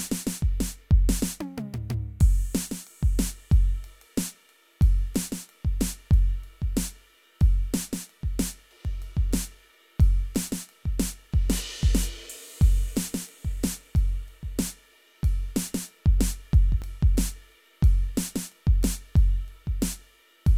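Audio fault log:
8.85 s and 16.82 s, overlap between stream segments: about 5 ms and 18 ms of music respectively are cut out and the waveform jumps, giving a brief click or skip. Both occur in a stream of 4-second segments. Unlike a dropout, no silence is inserted. Audio is removed.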